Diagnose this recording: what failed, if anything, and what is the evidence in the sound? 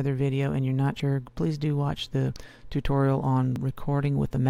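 Driver or buffer stage: the audio skips ahead at 1.0, 2.36 and 3.56 s, losing about 70, 40 and 40 ms with no silent gap, so likely a dropped buffer (overrun).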